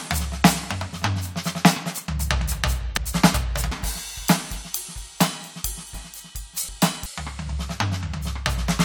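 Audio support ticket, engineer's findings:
Chunks out of order, 2.97–3.72 s and 5.94–7.06 s. Music jumbles at hard joins. Likely buffer/reassembly stage writing a 372 ms chunk late: one chunk late in the first span, two in the second. Nothing dropped, just misordered.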